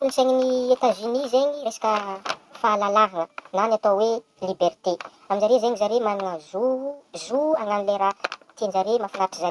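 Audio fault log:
throughout: wrong sample rate. Speech runs 1.5 times fast and about 7 semitones high, consistent with 16 kHz audio played back at 24 kHz without conversion.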